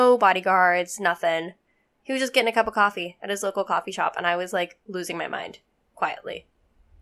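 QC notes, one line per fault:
Nothing stood out on listening to the speech in this clip.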